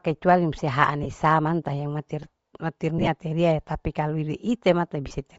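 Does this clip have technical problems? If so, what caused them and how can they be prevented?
Yes. Throughout, the speech has a breathy, grainy upper band, likely Bluetooth LC3 compression at a low bitrate (around 32 kbps would fit), where noise fills the upper spectrum. Unlike MP3 swirl, the grain stays steady. A higher bitrate setting prevents it.

Lost LE Audio frames cause brief noisy smears at 1.03–1.06 s and 5.08–5.11 s (each about 22.5 ms, fitting three 7.5 ms frames), and scattered dropouts across 2.98–3.08 s, the longest run roughly 15 ms. The decoder repeats the last spectrum with randomised signs, producing a smear rather than a silent gap or a clicking repeat. A stronger radio link, with less distance and interference, prevents these losses.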